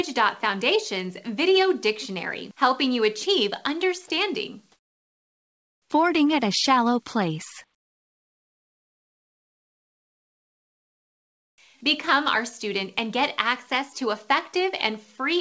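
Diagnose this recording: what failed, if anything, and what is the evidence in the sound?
Comfort noise in place of the background, at the call-processing stage. From 4.72 to 5.90 s and again from 7.74 to 11.58 s, the real background, which sits about 53 dB below the loudest passages, gives way to a steady, featureless hiss. It is about 8 dB quieter in the first gap and about 20 dB quieter in the second. The likely cause is discontinuous transmission: the sender stopped transmitting during pauses, and the receiver generated a synthetic noise estimate in place of the background.

Onset clipped by the voice detector, also at the call-processing stage. At 5.90 s the returning sound starts abruptly, missing its soft beginning. The missing 60 ms, from 5.84 s, is covered by the same comfort noise as the gap before it. The sender's voice detector was likely slow to reopen, so the first moments were never transmitted. 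This happens within a band-limited call path with nothing above 8 kHz, which fits G.722 at 64 kbps.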